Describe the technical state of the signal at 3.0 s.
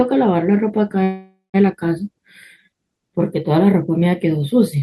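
At 3.0 s the speech is intact, with nothing wrong in the signal at that moment.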